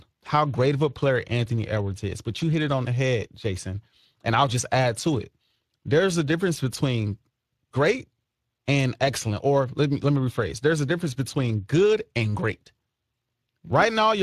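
Throughout, the speech sounds hoarse and grainy, with a hissy upper band and nothing above 15.5 kHz: Speex codec damage, fitting a rate near 22 kbps.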